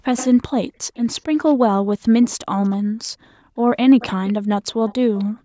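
A faint delayed copy of the speech trails it by about a quarter second at 0.16–0.29, 0.72–1.55, 2.23–2.76, 3.99–4.33 and 4.71–5.24 s, loudest early and late. This is echo leak, likely from a far-end loudspeaker whose echo canceller let some pickup return.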